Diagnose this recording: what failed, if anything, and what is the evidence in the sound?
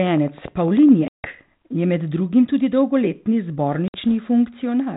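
Train of clicks from 0.07 to 0.90 s: about ten regular pulses near 9.8 per second, roughly at signal level, likely interference in the analogue wiring or interface.

Packet loss on the ADPCM call, a network fault: hard silent gaps of 160 ms at 1.08 s and 60 ms at 3.88 s. Afterwards the decoder's predictor and step size resynchronise with the sender.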